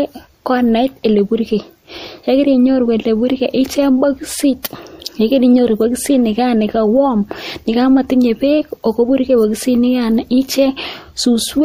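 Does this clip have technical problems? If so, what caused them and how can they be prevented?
Yes, there's pre-echo at 4.63 s in this speech. Just before a sharp attack you get a short hiss, about 11 dB above the quiet background, smeared over roughly 20 ms ahead of the onset, so the attack itself sounds softened. That fits a codec block of about 36 ms that never switched to short blocks, spreading the noise for the loud part across the silence before it. To prevent it, use an encoder with working block switching, or give it more bitrate on transients.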